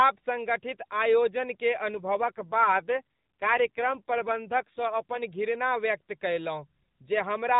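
From 1.94 s to 5.24 s there is an AMR rate drop. The weakened link pushes the codec down to a lower mode, which fits a step from 12.2 to 5.9 kbps. The speech stays narrowband below 4 kHz without gaps, but turns buzzier and more synthetic until the rate recovers.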